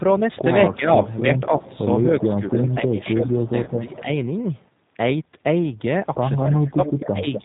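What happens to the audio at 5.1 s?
At 5.1 s, as everywhere in the clip, the speech has been rebuilt by a low-rate G.729 codec, likely about 8 kbit/s, so it sounds band-limited below 4 kHz, rough and synthetic.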